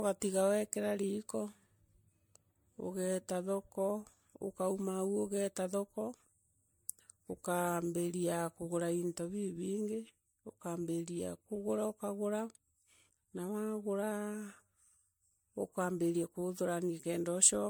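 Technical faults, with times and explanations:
Throughout, generation loss: the speech carries a swirly, hollow smear, with spectral holes and blurred consonant onsets. This is likely from about seven MP3 passes, consistent with 96 kbit/s. Unlike a single low-bitrate encode, the damage exceeds what that rate alone explains, and the band still extends to 20.1 kHz.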